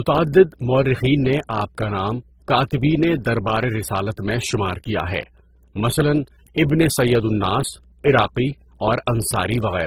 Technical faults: mains hum; transcoding between lossy codecs

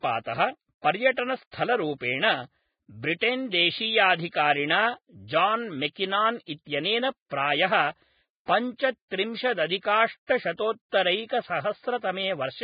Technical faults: Vorbis compression; pre-echo

